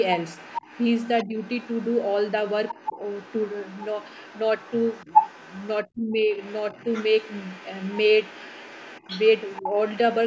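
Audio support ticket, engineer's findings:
Other side's voice leaking through: second voice under the speech, 0.02 to 0.06 s, then 0.22 to 4.4 s, 4.58 to 5.73 s and 6.32 to 10.15 s. Mostly about 20 dB below the talker. Closest at 4.58 to 5.73 s, only about 10 dB down. Likely cause: far-end loudspeaker picked up by the mic, residual echo not fully removed by the echo canceller.

Speech suppressed in double talk: talker's level dips at 1.25 to 1.35 s, roughly 10 dB for a tenth of a second. Deeper at 5.85 to 6.23 s, about 20 dB, close to 300 ms affected. Both sit where the far side plays over the talker. Likely cause: echo canceller unable to separate near talker from echo during overlap, attenuating both. Band tops out at 8 kHz, consistent with a 16 kHz call path.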